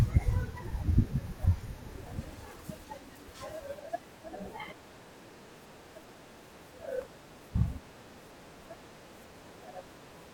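Periodic clock jitter runs through this speech recording from 1.93 s to the end. Interference is wobbling the converter's sampling clock at a steady rate of around 1 kHz, so each frequency in the sound picks up a pair of sidebands spaced about that far above and below it, growing stronger toward the top of the spectrum. The result is a rough, metallic edge riding on the voice that disappears whenever the speech pauses.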